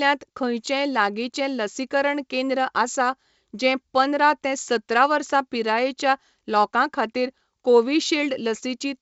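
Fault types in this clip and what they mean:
Nothing faulty is heard.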